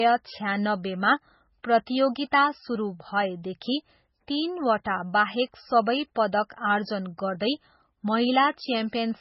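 Speech runs through the whole clip with heavy coding damage from start to finish. Nothing survives above about 5.6 kHz, so the treble is sliced off at a fixed point. The remaining sound is watery and swirly, as weak frequency lines flicker on and off from frame to frame. S sounds turn metallic and chirpy, and attacks smear. This is likely MP3 compression starved of bits, with damage this severe pointing to a very low bitrate, around 16 kbps.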